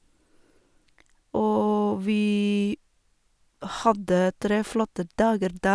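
Nothing stood out as a technical problem on listening to this speech recording.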